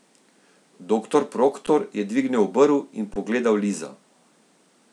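At 1.66 s, before "je dvignil", and from 3.14 to 3.16 s, an underrun with held sample flattens the waveform for 11 and 21 ms. Playback resumes softly, leaving blank vertical spectrogram bands.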